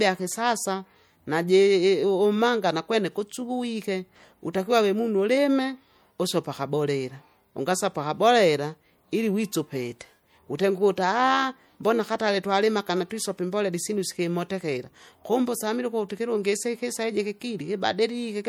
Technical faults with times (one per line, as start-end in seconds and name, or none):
0.00-18.49 MP3 compression